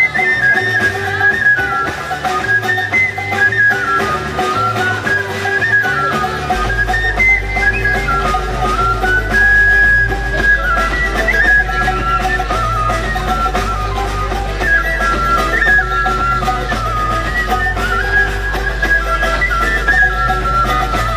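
From 6.55 s to the end, mains hum sits under the audio: a steady 50 Hz tone with low harmonics, only a few decibels below the signal. A ground loop or nearby transformer is coupling the power line into the signal path.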